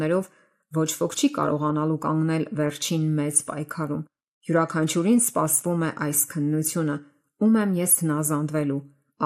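MP2 compression damage runs through the whole clip: the speech sounds dull and gurgling, with a granular roughness as upper bands drop in and out. The likely cause is MPEG Layer II coding starved of bits, which fits a rate around 80 kbps.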